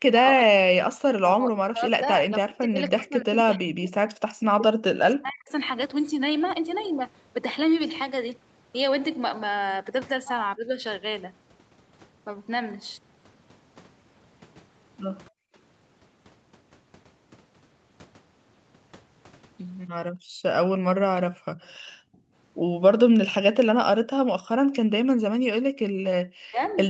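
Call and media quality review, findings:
Speech suppressed in double talk, 0.05–5.52 s, 10.56–10.83 s, 20.81 s to end. AEC likely unable to separate near talker from far-end echo, so it attenuates both. Near-end audio dips and breaks up, deepest near 40 dB, mild near 10.8 s.

Background gated by the echo canceller, 15.3–15.54 s and 20.11–24.69 s. Suppressor clamps the mic hard while the loudspeaker plays. Room noise drops out briefly, about 34 dB and about 37 dB deep, under a second in total, then returns.

Echo leak, 21.62–24.76 s. Far side's canceller likely leaving residual loudspeaker pickup, which is sent back. Faint delayed copy of the sound, 282 ms behind, roughly 35 dB below speech, over 8 kHz-limited Opus audio.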